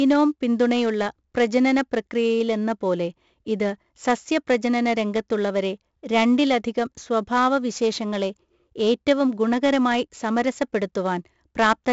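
Speech with 4-bit ADPCM compression throughout: a level-tracking gritty hiss rides on loud passages, attacks distort, and nothing above 7.7 kHz, which fits a 64 kbps stream.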